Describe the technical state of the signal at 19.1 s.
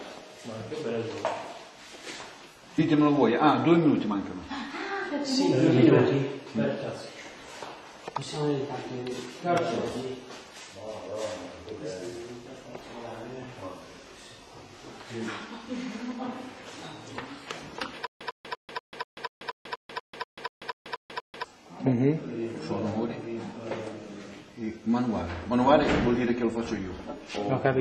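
At 19.1 s you're right in the middle of a stutter with silent gaps, running from 18.07 to 21.44 s. The same short burst of about 103 ms comes back 14 times, each followed by roughly 138 ms of dead digital silence, so it pulses at an even 241 ms cycle. That's likely a stalled player or stream replaying its last fragment on each retry and then running dry, and whatever audio belonged in that stretch is simply gone.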